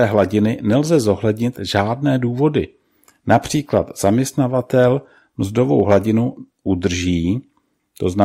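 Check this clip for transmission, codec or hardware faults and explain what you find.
Hard clipping is the one fault here, in six short bursts. At 0.18–0.21 s, 1.77–1.80 s, 3.31–3.37 s, 3.76–4.08 s, 5.80–5.97 s and 8.21–8.24 s, the speech peaks exceed what the signal chain can pass by about 2 to 5 dB, worst near 5.8 s. The tops are sheared flat, adding high harmonics heard as brief crackly grit on the loudest syllables.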